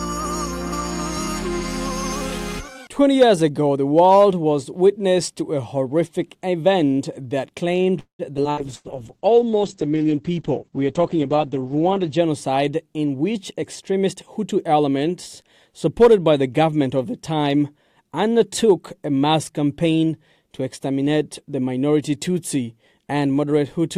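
Right at 7.99 s there's what's most likely a call audio freeze: packets seem to have stalled and the jitter buffer ran dry. Until 8.22 s you get about 0.2 s of filler, the last sound carried on and then falling away, with roughly 110 ms of it silent. When the audio returns it picks up exactly where it stopped, so nothing is lost, just delayed.

Straight after that come three quick skip-aheads at 8.37 s, 8.43 s and 8.51 s. Each time playback jumps forward to catch up on the backlog, dropping around 70 ms, 70 ms and then about a tenth of a second. The joins are almost seamless, so the sound just lurches ahead.

From 8.51 s to 12.26 s there's a call bitrate drop. The encoder was pushed from 128 kbps down to 9 kbps and held there for about 3.6 s, with the audio band narrowed from 20 kHz to 8 kHz. It turns coarse and muffled, with a watery edge, until the rate recovers.

Inside that stretch, at 8.75 to 8.87 s, a burst of packet loss hits. 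The receiver fills 92 ms by stretching the last bit of sound into a fading buzz or hiss, then resumes with 60 ms gone.

Then from 8.89 s to 9.73 s the jitter buffer slow-down kicks in to rebuild its reserve. It repeats tiny slices over and over, adding 121 ms, so things play at about 87% speed. The pitch stays put, but sounds get drawn out.

Later, from 13.05 s to 14.62 s, there's the opposite, a jitter buffer speed-up. The buffer had too much queued, so it trims short pieces repeatedly, cutting about 0.2 s in total. Playback runs at about 111% speed with unchanged pitch, and it feels a bit rushed.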